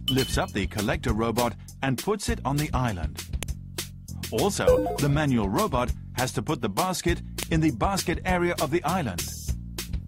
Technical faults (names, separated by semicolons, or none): file header played as audio